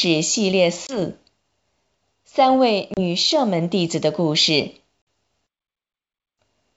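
Speech carried over a G.722 wideband telephone link, clear up to about 7 kHz, shows packet loss on an ADPCM call three times. Silent gaps of 20, 30 and 50 ms open at 0.87, 2.94 and 5.03 s. Each gap is a few lost packets. After each hole the decoder's predictor and step size no longer match the sender's. The sound returns distorted until they resettle, by 0.99, 3.00 and 5.07 s.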